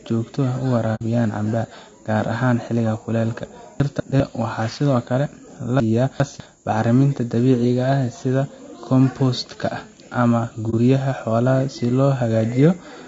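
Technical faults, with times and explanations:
Throughout: low-delay AAC compression. The speech sounds rough and grainy, with a hiss filling the gaps between harmonics and a top end that feels thin and a bit synthetic. That's likely AAC-ELD, the low-delay codec used for video calls, running at a rate that points to around 32 kbps. Its very short frames can't separate the pitch harmonics cleanly, and at that bitrate there aren't enough bits to cover the upper band properly.
0.95 to 1.02 s and 10.70 to 10.74 s: AAC frame loss with muting. There are two short soft-edged dropouts where the sound fades out and back in. The first gap fits two lost frames, about 60 ms of audio, and the second fits one, about 30 ms. The decoder zeroed the spectrum for the missing frames, and the overlapping windows smoothed the edges into a brief hole instead of a hard cut.
3.8 to 4.2 s and 5.8 to 6.4 s: chunks out of order. 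In both places the speech briefly jumbles, because a 200 ms chunk plays later than it should. In the first spot it's one chunk late, and in the second it's two chunks late, so that stretch is longer. No audio is lost, but the wrong order creates three abrupt seams at each spot.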